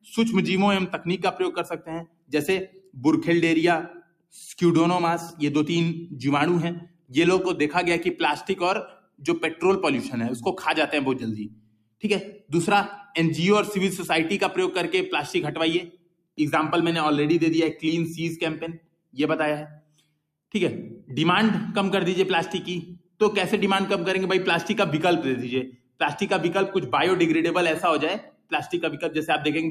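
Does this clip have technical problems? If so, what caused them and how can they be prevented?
Yes. Noise suppressor applied to music or sounds, throughout the clip: a suppressor built for speech treats steady tones, ambience and tails as noise, so the level swings by roughly 10 dB and the sound pumps and thins. Disable speech-oriented noise suppression, or switch it to a music or original-sound mode, when capturing non-speech audio.

Sound cut by the noise suppressor, at 0.01–4.33 s, 6.81–13.14 s, 15.86–21.1 s, 22.96–23.21 s, 25.69–26.01 s and 28.21–28.52 s: the suppressor judged these stretches to be noise and pulled steady or fading parts down by up to about 21 dB, cutting decays short. Bypassing the suppressor for this material prevents these dips as well.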